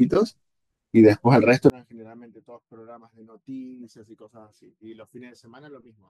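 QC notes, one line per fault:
1.70 to 6.10 s, one channel inverted: when the two channels are summed to mono, the speech suddenly drops by about 28 dB and stays down to the end of the clip. What remains is faint. The likely cause is one channel with reversed polarity. The centred voice is nearly identical in both channels, so the copies cancel. Only the small differences between the channels survive.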